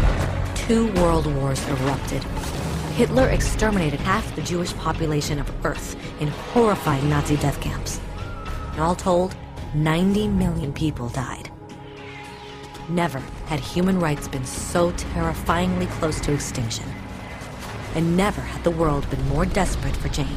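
Brief smeared blips at 4.04, 6.91, 10.62 and 12.37 s mark compressed frames skipped, where the audio lurches forward. At 4.04 s the jump is largest, about 150 ms, which fits roughly five lost frames of 26.1 ms. The others are shorter: one frame at 6.91 and 12.37 s, two at 10.62 s. Frames missing or rejected by the decoder vanish whole, and overlap between neighbouring frames softens each join into a blip rather than a click.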